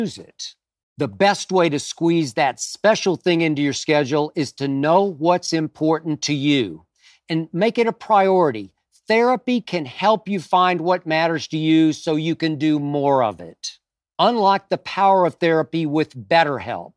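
No technical faults are audible anywhere in the recording.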